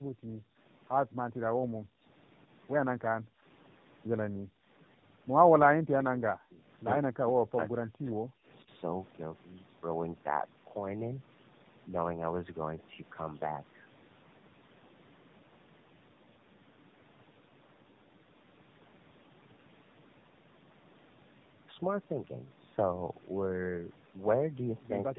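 Tandem speech coding runs through the whole clip. The speech passed through two low-rate speech codecs in a row, G.729A at 8 kbit/s and then AMR-NB at 10.2 kbit/s, with G.711 A-law between them. Each coder reworked the last one's damage. The result sounds rough, muffled and warbly, with nothing above 3.8 kHz.

From 0.0 to 0.58 s, and again from 1.03 to 2.03 s, the background is gated by the echo canceller. While the far end played, the canceller pulled the microphone down by about 40 dB. The room sound drops out, then returns when it lets go.

From 25.04 s to the end, the speech dips sharply for a brief moment, by roughly 40 dB. This is likely speech suppressed in double talk. Both sides spoke at once, and the echo canceller turned the near talker down along with the echo.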